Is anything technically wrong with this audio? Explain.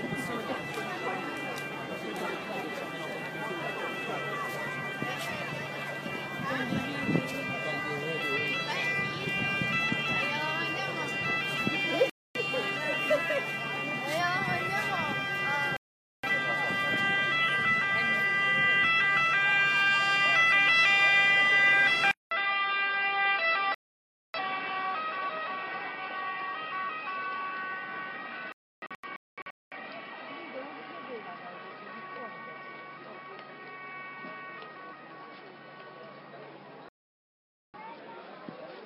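Yes, there are two kinds of fault.

Digital broadcast dropout occurs five times: 12.10 to 12.40 s, 15.77 to 16.28 s, 23.74 to 24.39 s, 28.52 to 29.77 s, and 36.89 to 37.79 s. The receiver stopped getting usable frames and muted until clean ones returned, so the sound simply vanishes and picks up further along. Each gap is a whole number of frames, from 6 to 21. The fourth event breaks into several short holes over about 1.2 s, the longest about 0.3 s. On a waveform these are flat-line gaps with abrupt edges. A spectrogram shows them as full-height vertical blank columns.

An input switched to a poorer device is the likely cause of the change at 22.11 s, which lasts to the end. There is a 200 ms silence, and then the sound returns duller and a little quieter, by roughly 5 dB. Nothing above 5.3 kHz comes through, which points to a narrower-band microphone or headset path, and a new low noise floor sits far below the signal. 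A spectrogram shows the upper band abruptly emptied from that point, and the waveform's envelope steps down.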